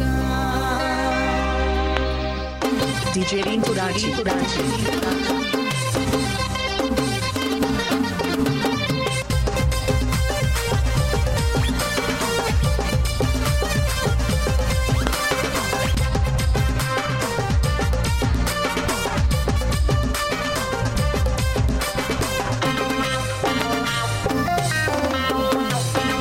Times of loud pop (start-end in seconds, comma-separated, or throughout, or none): 1.97-1.99, 15.07-15.33, 23.62-23.64, 25.52-25.54